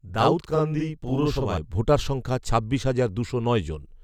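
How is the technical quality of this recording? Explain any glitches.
The recording has one clear technical fault, at the start of the speech. From 0.0 to 1.58 s the speech sounds doubled, with a second copy trailing the first by about 46 ms. At that gap it comes across as a tight slapback echo at equal level. This is a channel delay (doubling): one channel arrives late, by an amount that fits a 2048-sample buffer, and when both channels are summed to mono the late copy is heard separately.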